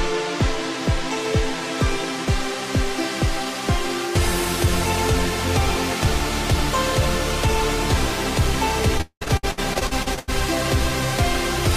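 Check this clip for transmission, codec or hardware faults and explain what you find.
One transmission fault appears: repeated packet loss (robotic sound) from 8.98 to 10.30 s. Around a dozen closely spaced gaps, the longest near 0.2 s, are patched by stretching the preceding sound, concealing 45% of the span. Unlike a single dropout, this gives a choppy sound with pieces missing.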